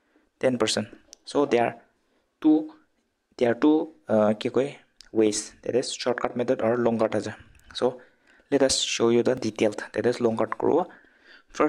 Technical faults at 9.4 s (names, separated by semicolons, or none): repeated buffer